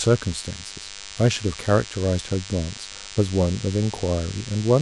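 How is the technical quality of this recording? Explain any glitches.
The speech is marred throughout by DECT cordless phone buzz. A nearby DECT handset or base transmits a radio burst every 10 ms, and the audio circuitry rectifies it. The result is a thin, steady 100 Hz buzz rich in harmonics, sitting roughly 15 dB below the speech.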